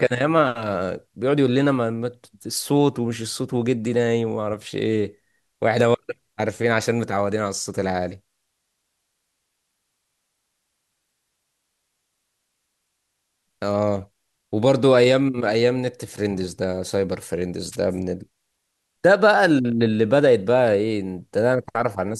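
At 17.72 to 17.76 s, a wireless microphone noise hit: the FM radio link fades briefly, letting receiver static burst through as a short swish, seen as a broadband vertical smear.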